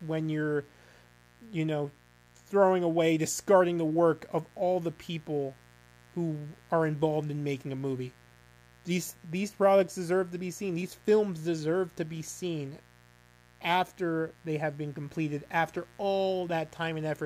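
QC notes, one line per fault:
Throughout, mains buzz: there's a steady, raspy buzz sitting under the speech for the whole clip, built on 60 Hz and roughly 30 dB below it. It's gritty rather than a clean hum because sharp switching spikes from something like a dimmer, a rectifier or a missing shield get in twice per mains cycle, and those spikes spray harmonics of 60 Hz way up into the kHz range.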